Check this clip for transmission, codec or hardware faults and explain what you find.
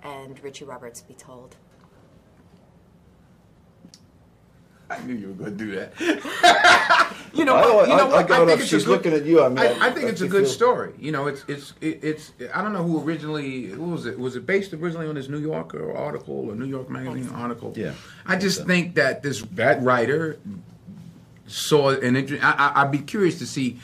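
Nothing here stands out as a transmission, codec or hardware problem; the audio comes across without any glitches worth flagging.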